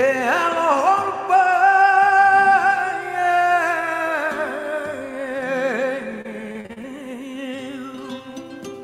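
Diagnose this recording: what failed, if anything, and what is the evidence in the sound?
Repeated packet loss on the network path, from 6.21 to 6.85 s. Across those 0.64 s the sound turns choppy and robotic. Half a dozen short holes, the longest 37 ms, are each patched by stretching the preceding sound, so about a quarter of the span is concealment, roughly 160 ms in all. On a spectrogram the stretch shows smeared, repeated horizontal bands between abrupt discontinuities. In the waveform, short periodic copies sit where fresh material should be.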